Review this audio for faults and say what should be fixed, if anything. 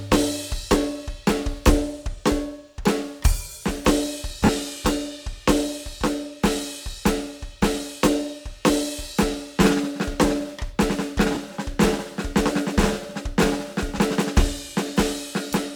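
At 4.45–4.49 s and 11.35–11.37 s the music briefly turns into a grainy, noisy smear, about 40 ms and 20 ms long. These are lost LE Audio frames. The LC3 decoder filled each gap by replaying the last good spectrum with scrambled phase, which fits four and two lost 10 ms frames. Strengthening the Bluetooth link, through shorter range, less 2.4 GHz interference or more retransmission headroom, would keep these frames from dropping.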